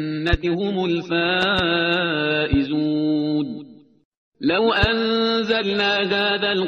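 There's a loud pop problem running through this one: a single sharp pop at 0.33–0.36 s, a quick double pop between 1.42 and 1.61 s, then single pops at 2.53–2.56 s and 4.83–4.86 s. Each jumps well clear of the sound, something like 15 dB above it, while the audio carries on underneath. The likely cause is a sudden voltage step or pulse from a plug, switch, static discharge or driver glitch.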